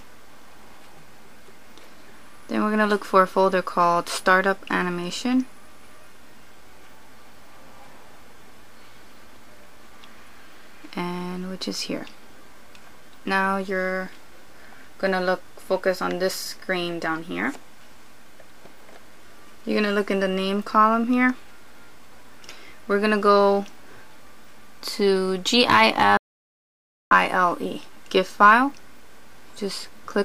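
At 26.17 s the input feed was likely lost for a moment, whether through a dropped connection, a failed link or an accidental mute, while the recorder kept writing silence. The result is an audio dropout to silence lasting until 27.11 s, roughly 0.94 s of silence. The sound stops abruptly mid-flow, the gap carries no room tone or background at all, and the audio resumes just as suddenly, with whatever occurred during that stretch missing.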